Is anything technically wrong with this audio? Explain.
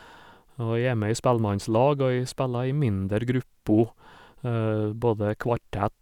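No, nothing is technically wrong with this audio.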